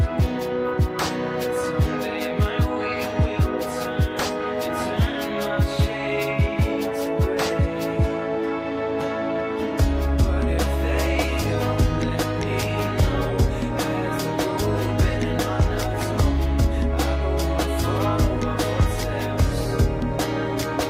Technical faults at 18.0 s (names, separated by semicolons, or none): none